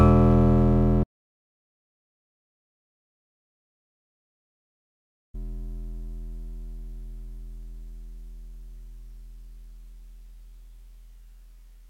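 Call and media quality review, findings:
Audio dropout to silence, music cut off 1.04–5.34 s, 4.30 s of silence with no room tone; likely input loss or mute upstream while encoder kept writing.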